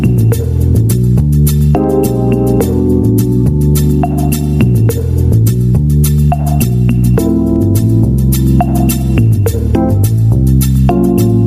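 Gain pumping runs throughout: the background swells in gaps and ducks roughly 10 dB under loud sounds, likely from a fast limiter. The waveform shows squashed peaks over a heaving noise floor.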